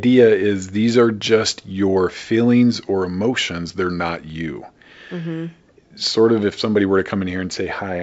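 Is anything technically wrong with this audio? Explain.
No, nothing in this speech clip points to a technical problem. It has been through G.722 wideband telephone coding at 64 kbit/s, so the audio reaches up to about 7 kHz, with at most a faint trace of the coding in the upper band.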